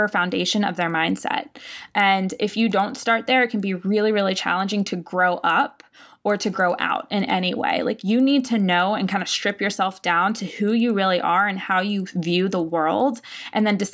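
Throughout, a resampler restarted on every block leaves an error at each block edge, ticking at 10 Hz (fitting 100 ms blocks), only while sound plays, never in pauses.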